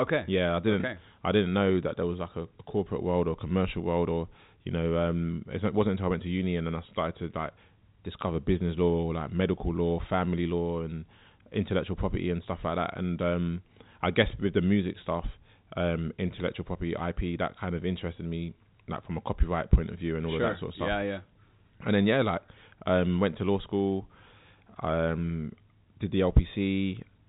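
The clip is speech carried over G.711 telephone coding, with nothing above about 3.8 kHz, and nothing is technically wrong with it.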